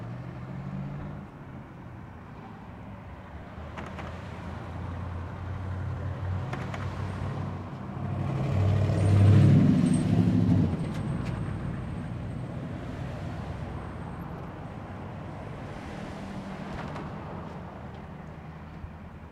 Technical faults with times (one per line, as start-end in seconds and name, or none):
1.31 compressed frames skipped